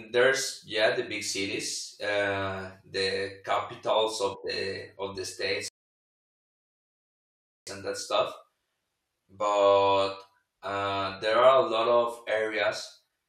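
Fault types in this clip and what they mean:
Rebuffering stall: the player exhausted the audio it had downloaded and paused until more data arrived, so at 5.68 s the speech drops abruptly to silence and picks up again at 7.67 s exactly where it left off, with nothing skipped and about 1.99 s added to the running time. On a waveform this shows as a flat, empty gap between intact stretches; on a spectrogram, a blank vertical band with no energy at any frequency.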